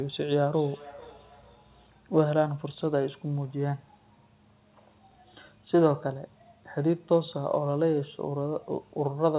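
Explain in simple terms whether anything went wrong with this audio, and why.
From 0.43 to 2.07 seconds there is feedback echo between two devices. Two devices in one room are on the same call. One plays the sound, and the other's microphone picks it up again. Each word returns roughly every 0.4 seconds, fainter and thinner.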